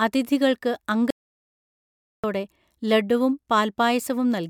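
At 1.11 s the speech cuts off mid-flow into a playback stall lasting about 1.13 s, to 2.24 s, most likely because the player ran short of data or its thread was blocked. The waveform drops to a flat line, and the spectrogram shows a clean, empty vertical band before the speech resumes.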